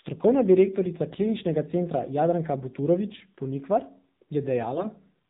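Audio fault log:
Throughout: AMR narrowband mobile codec. Nothing gets through above 4 kHz, so the speech sounds boxed-in and phone-like, and the buzzy, plainly synthetic edge on it fits one of the lower AMR-NB modes, around 7.4 kbps, where few pulses drive the vocal-tract model.
1.10–1.21 s and 4.72–4.91 s: AMR bit errors. Pitch and level hold, but the speech briefly goes hoarse and gargly, because flipped low-priority bits misplace the excitation pulses and skew the finer gain and spectral values. The first burst is rougher, with a few percent of bits wrong, spread over roughly five and eight frames respectively.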